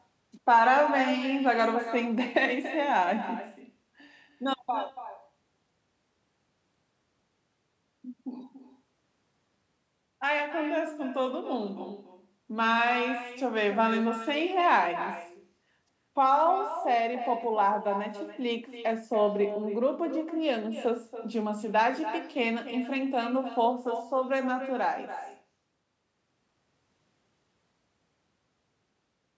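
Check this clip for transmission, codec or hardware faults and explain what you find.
One fault runs through the whole clip: echo with no canceller. The far end's loudspeaker feeds its microphone, so the talker returns roughly a third of a second later, about 11 dB quieter. Each phrase gets a thin shadow. The call microphone processing caps the band at 8 kHz.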